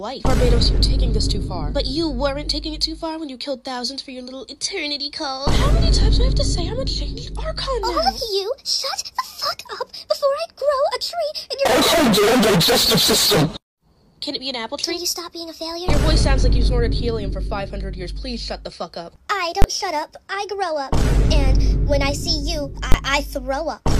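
Two sharp bangs, at 19.62 to 19.64 s and 22.92 to 22.94 s, each a 20 ms block of invalid numbers at full scale, where calculations produced infinite values clamped to maximum level.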